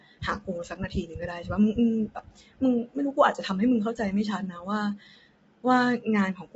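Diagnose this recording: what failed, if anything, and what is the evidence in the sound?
The codec stage failed. Throughout the speech sounds rough and grainy, with noise filling the gaps between harmonics. Nothing is present above 7.7 kHz. This is likely low-delay AAC compression, with short frames starving pitch detail, which fits a bitrate near 24 kbps.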